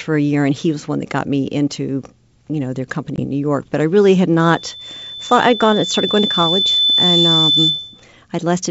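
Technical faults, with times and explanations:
3.16 to 3.24 s, packet loss on an ADPCM call: a 20 ms gap, about one packet's worth, drops to hard-edged silence. The receiving decoder's predictor and step size lose track of the sender's, so speech re-enters with brief distortion before settling.
4.42 to 8.06 s, loudspeaker feedback squeal: a single tone near 3.5 kHz swells over roughly three seconds as the microphone picks up its own loudspeaker and loop gain at that frequency exceeds one, ending about 5 dB above the speech.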